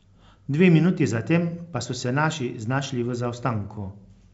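Nothing here stands out as a fault: the speech comes across as ordinary G.722 wideband telephone audio, clear up to about 7 kHz with at most a faint touch of the coder's upper-band hiss, which fits the full 64 kbit/s mode.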